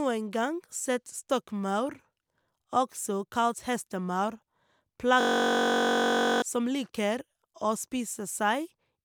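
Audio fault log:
5.21–6.42 s, system hang loop: the computer or driver froze while the sound hardware kept cycling its ring buffer. One 21.3 ms slice repeats dozens of times as a steady 46.9 Hz buzz, which fits a 1024-sample buffer. About a second of audio is lost.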